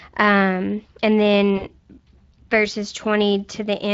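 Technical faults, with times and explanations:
Throughout: Speex codec. The speech has a grainy, hoarse texture that is plainly audible. Speex models each short frame with a vocal-tract filter and a coded excitation signal. The excitation gets only a limited bit budget, so the fine detail of the voice is replaced by an approximation with a noisy edge. The damage is consistent with a Speex mode of roughly 20 kbps. It is not the near-vocoder sound of the lowest settings.
1.57 to 1.67 s: VoIP packet loss concealed by the speech codec. About 40 ms of audio went missing, which fits two lost frames. The decoder filled the gap by extending its last pitch and filter with falling gain. This produces a brief stretched sound that fades. Each decoded frame depends on the one before it, so the speech stays weak or distorted for tens of milliseconds or more after real data returns at about 1.67 s.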